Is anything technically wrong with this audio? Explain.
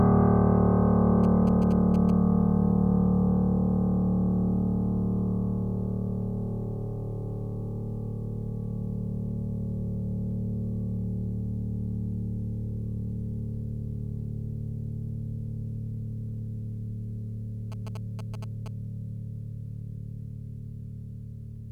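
Yes. At 1.24 to 2.10 s and again at 17.72 to 18.68 s, GSM signalling bursts break into the music. A nearby 2G phone is handshaking with its network, and the audio circuitry rectifies those radio pulses. You hear a galloping dit-dit-dit of short 217 Hz buzzes, roughly 15 dB below the music.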